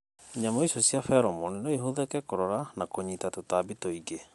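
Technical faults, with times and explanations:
Throughout, Bluetooth LC3 compression: the speech has a plainly audible grainy, breathy edge and nothing above 11.5 kHz, which is likely LC3 at a modest rate, around 48 kbps, with 10 ms frames, as the codec trims and noise-fills the upper band.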